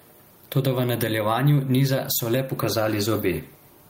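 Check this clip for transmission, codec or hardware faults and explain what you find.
There is one fault, gain pumping, present throughout the speech. The likely cause is input gain set far too high, with a fast limiter clamping down on every loud syllable. The gain swings roughly 10 dB, so loud and soft parts end up closer in level and sound squashed. A waveform shows flattened peaks with quieter parts sitting closer to them in level.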